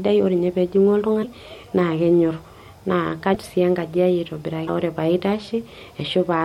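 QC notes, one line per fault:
1.22–1.25 s, 3.33–3.36 s, 4.66–4.69 s: broken MP3 bit reservoir. Each event is a brief glitch of about 26 to 32 ms, after which the speech jumps slightly ahead. That span matches one MP3 frame of about 26.1 ms. The likely cause is a dropped frame. The next frame then reaches back into the reservoir for borrowed bits and decodes data that belongs to a different frame.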